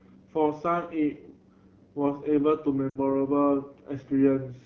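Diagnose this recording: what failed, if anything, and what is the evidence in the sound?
The codec stage is running AMR wideband (HD Voice) at one of its lowest modes. The rough, raspy texture throughout the speech fits about 8.85 kbit/s, where the pulse-driven vocal tract model is too coarse to rebuild the voice cleanly, and the band above 6.4 kHz is filled with shaped noise.

At the network stage, lost AMR speech frames from radio errors hit between 2.89 and 2.99 s. The decoder reused the last good pitch and vocal tract settings at falling gain, so within the roughly 60 ms gap, consistent with three 20 ms frames, the sound drops to near silence within two frames, then returns briefly weak or rough.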